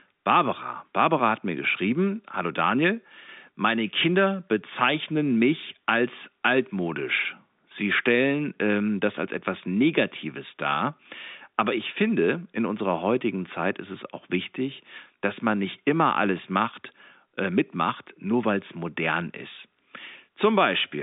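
No technical faults are audible in this speech.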